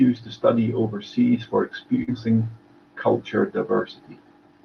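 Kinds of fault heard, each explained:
Short concealed packet loss: just after "to study overseas for", around 2.03 s, a brief smear where roughly 40 ms went missing and was filled by continuing the preceding sound.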